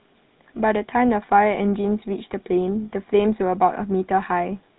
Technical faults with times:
0.00-4.78 GSM full-rate codec

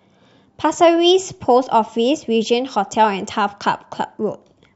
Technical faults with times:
none

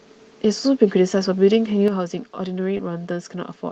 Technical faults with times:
1.88-3.72 one channel drops out
2.77-2.81 short concealed packet loss

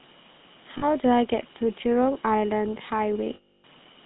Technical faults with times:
0.00-4.05 GSM full-rate codec
0.78-0.85 lost GSM frames
3.34-3.66 lost GSM frames

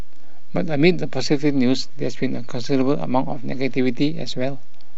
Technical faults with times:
0.00-4.97 DC offset

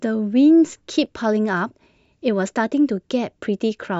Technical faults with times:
1.06-3.05 clock drift buffer slips

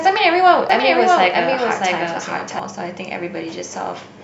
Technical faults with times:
0.69-2.59 doubled audio track

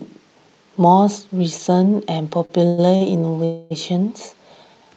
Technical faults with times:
2.45-2.51 short stall from a late packet
2.67-2.80 call audio freeze
2.96-3.02 short stall from a late packet
3.44-3.72 call audio freeze

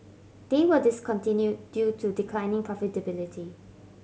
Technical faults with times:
none

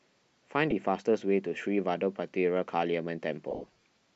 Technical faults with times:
0.71 lost LE Audio frames
3.51-3.83 lost LE Audio frames

